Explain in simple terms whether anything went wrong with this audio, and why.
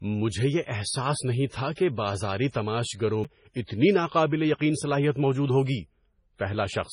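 Yes, two things went wrong. Throughout the speech, everything above 10.5 kHz is missing, and the sound has a watery, swirly quality with blurred consonant starts. That is heavy MP3 compression, likely the cause: the encoder ran short of bits, cut the treble and dropped weaker detail.

At 3.24 s there is a CD skip. The player falls silent for only a few thousandths of a second, giving a small tick, then carries on from a different spot on the disc because a knock or flaw made the laser jump.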